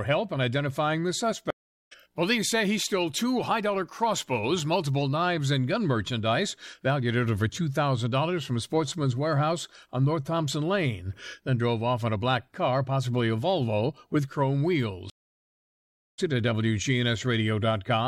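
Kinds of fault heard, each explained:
Stream reconnect: at 1.50 s and 15.10 s the connection drops, leaving silence of 0.40 s and 1.08 s; playback then resumes further along, skipping roughly 0.4 s and 1.5 s.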